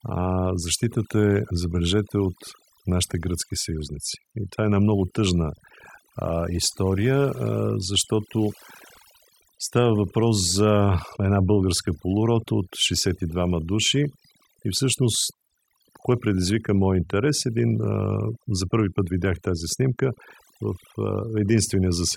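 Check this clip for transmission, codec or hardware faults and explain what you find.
One fault runs through the whole recording: overdone noise removal applied to speech. Throughout the clip, a noise reduction stage set far too aggressively is suppressing individual frequency bands whenever their level sits close to its noise estimate. Low-level parts of the speech fall under that threshold and are cut along with the noise, while isolated bands flicker in and out. The result is a background of near silence scattered with twinkling, chirpy specks.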